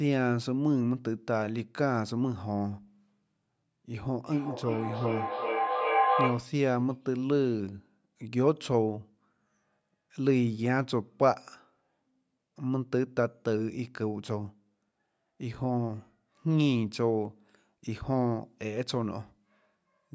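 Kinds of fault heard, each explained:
Feedback howl: from 4.21 to 6.61 s, a tone near 700 Hz swells over the speech, peaking about 1 dB above it. Two devices on one call in the same room formed a loop from microphone to loudspeaker and back that gained level on each pass, so the repeats grew instead of fading and narrowed onto the pitch the loop favoured. The repeats came roughly every 0.4 s, the loop's round-trip delay, and the howl lasted until the loop broke.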